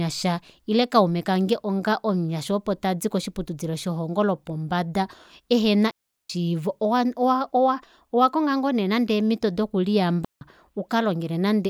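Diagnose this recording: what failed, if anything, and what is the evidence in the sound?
Two clean, noise-free silent holes, at 5.91–6.30 s after "koshiputudilo shelongo lopombada ehena" and 10.25–10.41 s after "ngoo neenande eemito doku": a digital wireless dropout, where the receiver mutes briefly when the radio link loses data.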